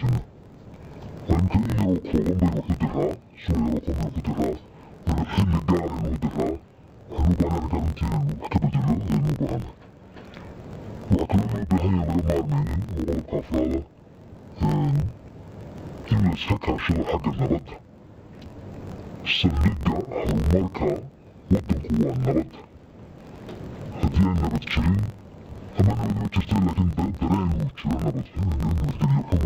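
The whole clip suffers from interleaved audio read as planar. Each block of about 21.8 ms holds alternating left and right samples. The player reads the first half as left and the second half as right. Each half is stretched to fill the block, so the sound drops an octave, 12 semitones down, while keeping its overall pace. The block edges repeat at 45.9 Hz, adding a steady buzz and a dull, robotic texture.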